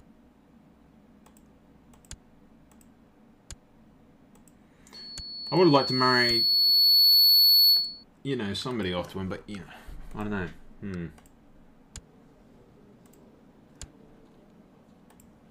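From 4.94 s to 8.04 s, loudspeaker feedback squeal: the microphone re-amplifies the loudspeaker, and because the loop gain exceeds one at 4.4 kHz, that tone grows by itself. A pure tone swells over roughly two seconds to about 10 dB above the sound, a bright horizontal line on a spectrogram, with rising waveform envelope.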